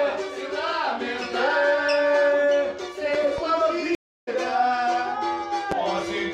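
Between 3.14 and 3.41 s a loud pop occurs as two sharp clicks in quick succession, peaking roughly 10 dB above the surrounding audio while the sound continues underneath. This is likely an electrical transient, such as a switch, static discharge or driver glitch, injecting a voltage step that the downstream circuitry shapes into a brief pulse.

A stream reconnect follows from 3.95 to 4.29 s. The connection dropped and playback went silent for 322 ms. The player then re-established the stream and started a fresh decoder partway through. When audio resumes it has jumped ahead by roughly a fifth of a second, so the material that would have played during the gap is missing rather than delayed.

A second loud pop, a single one, falls at 5.72 to 5.75 s, again around 10 dB above the signal and sitting on top of the continuing sound. It has the same short, hard attack as the earlier pair, consistent with another transient entering the signal path.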